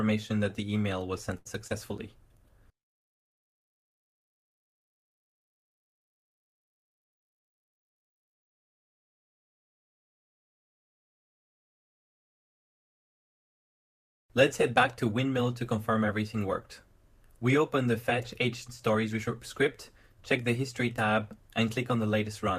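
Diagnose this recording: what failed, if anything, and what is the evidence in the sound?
At 1.37 s the sound hangs on one moment for about 80 ms, a held, faintly buzzy smear, and then resumes from exactly where it paused, at 1.47 s. This is a short stall from a late packet at the network stage. A packet arrived after its playout time, so the jitter buffer emptied and the receiver stretched the last audio to cover the gap. Nothing was lost, but everything after this point plays about 81 ms later than before.

Just after, between 1.67 and 1.72 s, there is a quick wobble lasting a few hundredths of a second. This is short concealed packet loss, again on the network side. About 20 ms of audio never arrived, and the decoder covered the gap with roughly 23 ms of synthesised continuation of the preceding sound before crossfading back into the real signal. The content from that brief window is simply gone.

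From 2.06 s to 9.33 s the sound turns rough and watery. This is a call bitrate drop, where the network and codec stages interact. The call's bandwidth estimate fell, so the encoder was pushed from 96 kbps down to 27 kbps and held at that floor for about 5.5 s. At that rate the codec quantises coarsely, and clarity returns only when the rate recovers.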